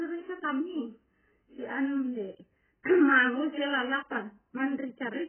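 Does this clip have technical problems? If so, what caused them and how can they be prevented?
Yes. The speech runs through the whole clip with nothing above about 3.1 kHz, so it sounds dull, and the damage is heavy: the sound is smeared and has a watery, warbling texture. That's likely AAC compression at a very low bitrate, somewhere around 9 kbps. At that rate AAC-LC drops the top of the spectrum and leaves gaps elsewhere. To prevent it, encode speech at 32 kbps or more, or keep a lossless master.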